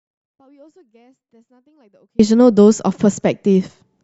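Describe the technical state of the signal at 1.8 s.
At 1.8 s the speech is in an audio dropout to a faint residue, under way from the start until 2.19 s. Only a faint leak about 40 dB down remains, likely from a live path carrying a lost signal.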